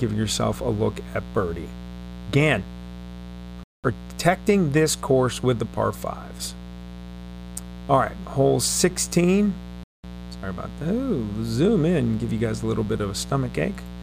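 A mains buzz runs through the whole clip, sitting about 15 dB below the sound. Sharp switching spikes on the 60 Hz supply leak in twice per cycle, giving a raspy edge. On a spectrogram it appears as evenly spaced horizontal lines at multiples of 60 Hz, climbing into the kilohertz range.

A gap between chunks cuts the audio at 3.64 s and again at 9.84 s, each hole lasting 200 ms. The two gaps are 6 s apart, which fits audio handled in fixed 6-second blocks with silence inserted at each join. Nothing is lost, but the sound stops and restarts abruptly. The waveform drops to a flat line with hard edges, and the spectrogram shows a clean vertical blank band.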